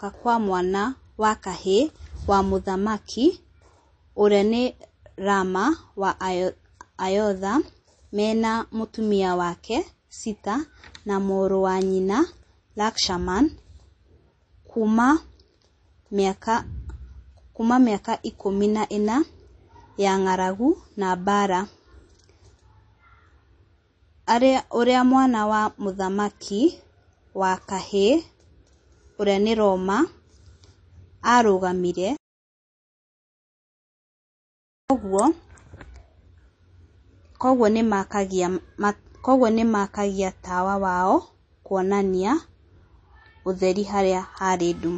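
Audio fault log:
throughout, MP3 compression: plainly audible watery, swirly speech with nothing above 8.3 kHz, likely from MP3 encoding starved of bits, which fits a bitrate near 32 kbps.
34.88 s, pre-echo: a short hiss lasting 19 ms precedes a sharp attack and softens it, as quantisation noise spread across the block fills the moment before the onset.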